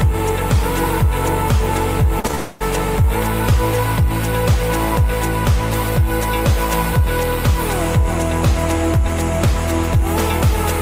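Short concealed packet loss occurs three times in quick succession: from 2.19 to 2.25 s, where about 40 ms of audio failed to arrive, then 2.27 to 2.31 s and 2.31 to 2.35 s, each missing about 20 ms. In each gap the receiver extended the preceding sound, repeating its pitch or shaping noise to match, before crossfading into the real signal again. The result is a cluster of brief smears and wobbles.

A long network dropout follows directly from 2.35 to 2.62 s, roughly a quarter of a second. Here the sound is stretched across the whole gap as a sustained, gradually fading continuation of the last material, with no fall into silence before the real audio resumes at 2.62 s. The stretch of genuine sound from that quarter second is simply gone. Arriving right on top of the earlier losses, the likely cause is a burst of lost packets.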